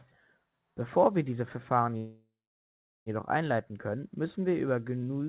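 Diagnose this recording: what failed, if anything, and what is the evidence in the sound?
A call audio freeze sits in the network and jitter-buffer stage, likely from packets held up in transit. At 1.97 s the speech stops advancing and the last sound is stretched into a fading buzz that drops to silence, with about 0.75 s of that stretch silent, until the speech resumes at 3.09 s exactly where it left off. About 1.1 s of gap has been inserted and nothing is lost. On a spectrogram, already empty above 4 kHz from the call codec, the final frame smears horizontally, fades, then shows a blank stretch. The waveform's envelope decays to flat before normal speech returns.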